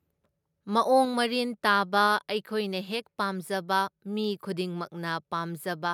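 Speech with the microphone volume stepped down twice: about 3 dB at 1.05 s, just before "ꯃꯔꯤꯟ ꯇꯥꯕ", then about 1 dB at 2.07 s, right after it. Likely the call software trimming input volume. Unlike a fade or compressor pumping, each drop is instant and the level stays down.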